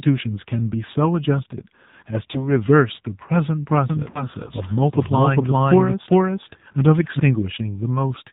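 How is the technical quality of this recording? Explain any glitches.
Technical quality is limited: the whole recording went through a phone call, and there are two brief dropouts.

Throughout, the AMR narrowband mobile codec is plainly audible. Everything above 4 kHz is gone, and the synthetic buzz fits a low 7.4 kbps mode.

Lost AMR speech frames occur at 2.32 to 2.48 s and again at 4.10 to 4.28 s. The decoder patched the gaps by repeating its last settings at falling gain, so you hear a short warble or dip. The first sounds like one missing frame; the second, longer one fits about 40 ms of lost audio.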